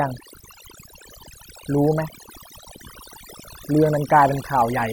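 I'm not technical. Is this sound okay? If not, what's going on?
No, not quite. The whole clip suffers from overdone noise removal. A cleanup tool was set too strong. It treats quiet parts of the sound as noise and switches them off. Between phrases, the background drops to near silence with twinkling specks. The voice loses its softer details. This happens from start to finish.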